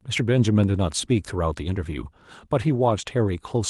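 Nothing goes wrong anywhere in this bit of speech; what you hear is just the ordinary sound of a call path, with the top end rolling off at around 12 kHz, as you'd expect from Opus on a call.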